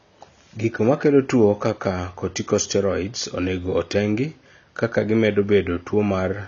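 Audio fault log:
Throughout: AAC compression. The speech sounds dull and smeared, and the damage is plainly audible. Nothing is present above about 7 kHz, so sibilants lose their edge and sound fizzy. Sustained sounds carry a warbling texture. The likely cause is AAC-LC coding at a low bitrate, around 24 kbps by the sound of it. At that rate the encoder drops the top band and quantises the rest coarsely against a hearing model, leaving holes in the spectrum.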